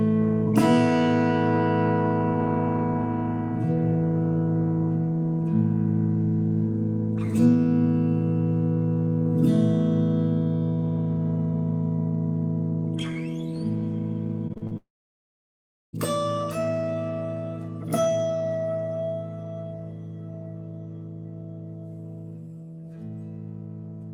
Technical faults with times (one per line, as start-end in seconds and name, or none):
14.47-14.73 repeated packet loss (robotic sound)
14.77-15.95 long network dropout